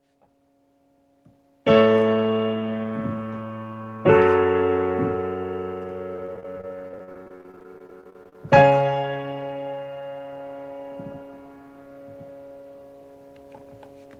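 Repeated packet loss (robotic sound) runs from 6.16 to 8.35 s. Dozens of short gaps, none longer than 40 ms, are patched by extending the preceding sound, so about a quarter of the stretch is concealed. It sounds choppy, with fragments dropping out.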